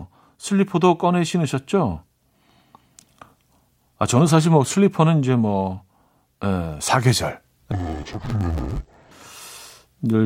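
From 7.72 to 9.12 s the speech turns dull and robotic, buzzing at about 94 Hz. That is interleaved audio read as planar: short blocks of about 10.7 ms, fitting 512 samples, are split in half wrongly. Unlike a pitch shift, there's no clear octave drop.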